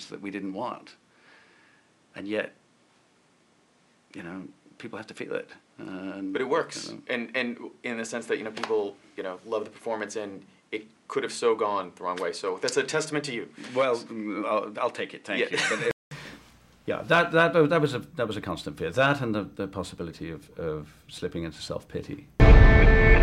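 From the start up to about 16.11 s, the audio is band-limited, with nothing above 11.4 kHz, so it sounds dull and boxy. It also sits roughly 5 dB quieter and has its own noise floor, around 35 dB under the signal. At 16.11 s there's a gap of about 200 ms, and then the sound opens up. That's most likely an input switched to a poorer device for that first stretch, with the recording flipping back to the better microphone at the gap.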